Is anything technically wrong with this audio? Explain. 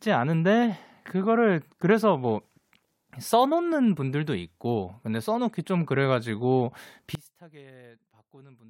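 Yes. From 7.15 s to the end at 8.69 s, the speech falls by about 26 dB to a faint residue. This points to one channel inverted: one side's polarity is likely reversed, so the centred speech cancels in mono and only the small inter-channel difference remains.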